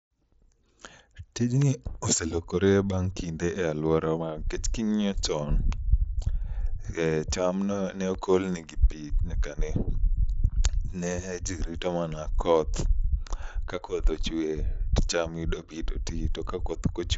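No technical fault can be heard in this speech recording, which comes through an mSBC Bluetooth headset link at 61 kbps with its content ending near 7.7 kHz, as expected for that wideband codec.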